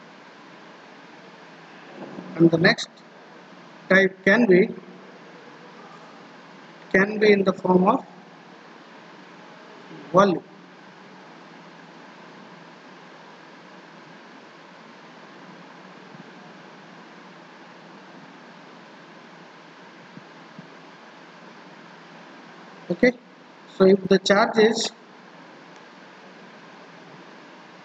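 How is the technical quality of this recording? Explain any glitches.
Nothing here catches the ear as a glitch; the recording runs along without any technical trouble worth pointing out.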